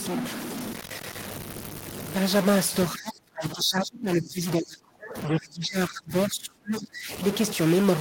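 A stuck bit runs through the whole recording, most likely from a data line or converter bit frozen at one value. Roughly half the samples are pushed off by that bit's fixed weight, following the waveform, which distorts the speech. Because the error flips with the sign of small samples, the quiet gaps between phrases are filled with hiss instead of silence.

Speech suppressed in double talk affects the stretch from 2.94 to 7.1 s, about four seconds in all. The likely cause is that both ends spoke at once and the echo canceller could not tell the near talker from the loudspeaker echo, so it attenuated everything. The voice sinks, falling by as much as about 30 dB at its deepest before recovering.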